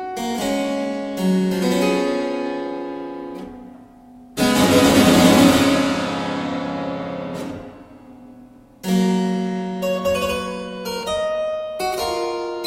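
No dropouts, clicks, distortion or level jumps turn up anywhere in the audio.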